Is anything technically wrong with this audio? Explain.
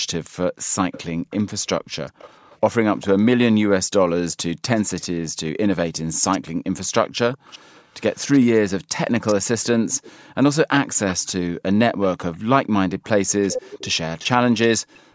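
Yes, two faults are audible.

Background gated by the echo canceller, from 0.0 to 2.5 s, at 7.59 to 7.75 s, and from 14.79 s to the end: the canceller clamps the microphone while the far end plays, so room tone sinks by about 40 dB. It dips for well under a second each time, unlike a steady noise gate.

Echo leak, from 0.92 to 3.06 s, 4.32 to 5.07 s, 6.32 to 10.12 s, and 11.08 to 14.26 s: a delayed copy of the speech trails by 405 ms, later 375 ms, sitting roughly 15 to 30 dB down. The likely cause is residual loudspeaker pickup that the canceller missed and sent back. Its distinct, fixed-delay repeat sets it apart from smeared room reverberation.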